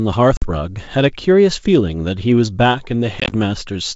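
At 0.37 s a hard-edged 50 ms silence cuts the speech. From 3.2 to 3.34 s, 70 ms drops out in gaps of up to 20 ms. This packet loss on an ADPCM call throws the decoder's predictor off, so each return comes back slightly distorted, showing as blank spectrogram bands.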